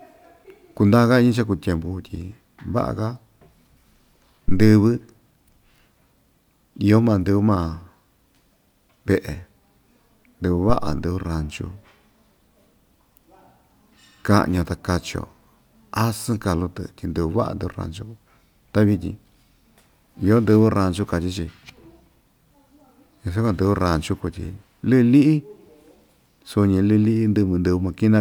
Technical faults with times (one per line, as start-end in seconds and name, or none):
4.48-4.79 phantom power thump